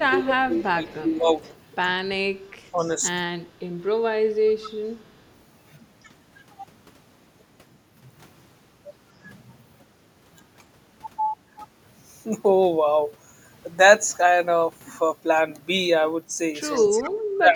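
Speech suppressed in double talk runs from 0.09 to 1.25 s. The voice dips by about 15 dB, likely because the echo canceller mistook the overlapping far-end talk for its own echo and turned everything down.

Echo leak appears from 0.56 to 1.55 s as a faint copy of the voice arriving 0.22 s late and sitting about 30 dB below it. This is likely echo the far end's canceller failed to remove from its loudspeaker pickup.

The same 0.22 s echo returns from 2.43 to 2.89 s at about 25 dB down. It overlaps a brief suppression from 2.72 to 2.89 s, where the voice sinks by only about 5 dB.

Short echo scraps follow from 4.61 to 4.70 s and from 16.75 to 17.03 s, each about 20 dB below the voice.

From 16.79 s to the end, double-talk suppression is severe. The voice drops by about 35 dB, close to cutting out entirely.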